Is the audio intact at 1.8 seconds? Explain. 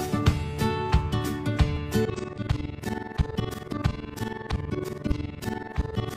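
No, there is a repeated buffer at about 1.77 s: audio arrived late, so a 1.45 ms chunk, which fits a 64-sample buffer, was replayed twice more, producing a click or brief buzz.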